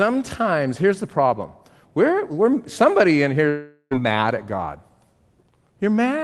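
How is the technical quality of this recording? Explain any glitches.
The speech carries one glitch, heard over the restrained top end of a call codec whose bandwidth stops around 12 kHz, as Opus at about 24 kbps would.

From 3.49 s to 3.93 s the speech gives way to a smeared, buzzy continuation of the last sound that fades out, leaving a brief gap of about 20 ms before the speech resumes. This is likely a long network dropout: roughly 0.42 s of audio never arrived, the receiver stretched the final fragment to cover about 0.41 s, and playback picks up later without the lost portion.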